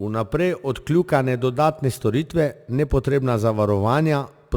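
Throughout the speech, a crude rate conversion repeats samples by nearest position with no filtering, which fits a change from 44.1 kHz to 48 kHz. The resulting error, roughly 30 dB below the speech, adds a gritty, inharmonic fizz that tracks louder and brighter sounds.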